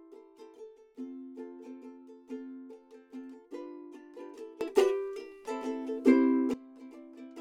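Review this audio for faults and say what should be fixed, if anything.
A sudden gain jump lifts the sound and its background noise together by about 16 dB at 4.61 s, holding until 6.54 s, where the level drops back. The instant step likely comes from a digital gain change applied between samples without any ramp. Apply gain changes through a short smoothed ramp rather than as a single-sample switch.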